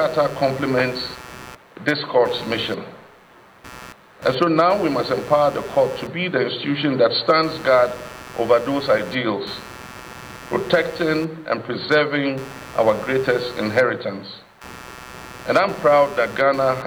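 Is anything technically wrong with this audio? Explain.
Yes, there's computer activity noise running through the whole clip. The computer's processor, graphics card or mouse is drawing varying current, and those load swings are wobbling the ground the audio circuit shares with it. You hear it as a buzzy, chirping pulse repeating somewhere around 150 times a second, sitting roughly 20 dB under the program, and it tracks the machine's workload rather than anything in the audio itself.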